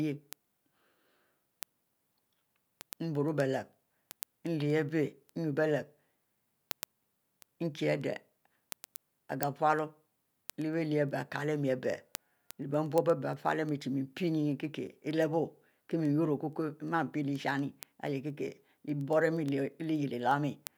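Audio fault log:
0.21–20.67 s, word clock ticks: the receiving device runs on its own clock, unlocked from the sender's and off by roughly 200 ppm, so a sample is slipped about every tenth of a second, giving around 200 sharp, unevenly strong ticks across the speech.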